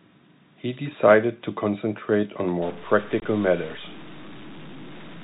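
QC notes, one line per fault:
2.62 s to the end: stuck bit. The sound suddenly turns distorted, and the pauses fill with gritty noise instead of going quiet. That's likely one data bit jammed at a fixed value, throwing roughly half the samples off by that bit's weight.
3.20 to 3.22 s: packet loss filled with silence. A 20 ms hole drops straight through the speech, with hard edges where the missing packets were replaced by dead air. The gap length fits two 10 ms packets going missing.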